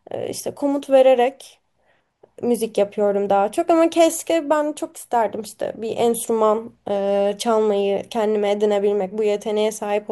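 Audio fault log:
No faults are heard in this speech recording. There is nothing here to log.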